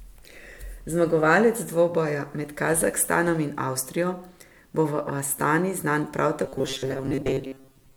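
From 6.44 s to 7.96 s, new audio likely arrived too seldom, so playback kept repeating a segment of about 7.5 ms in place of most of the missing material. This robotic sound from repeated short buffers turns the speech into a rigid, metallic 134 Hz buzz.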